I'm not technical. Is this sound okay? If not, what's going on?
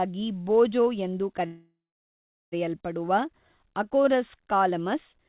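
No. At 1.46 s, just after "ಬೋಜೋ ಎಂದು", the speech stalls for about a second, until 2.54 s. This is a call audio freeze. The likely cause is that the data carrying the audio got held up in transit. The receiver stretched the last bit of sound into a short fading buzz or hiss, then went silent for the last 0.78 s of the gap. When the data arrived, speech picked up where it stopped, so nothing was lost, only delayed. The phone-quality dullness, with nothing above 4 kHz, comes from the call itself.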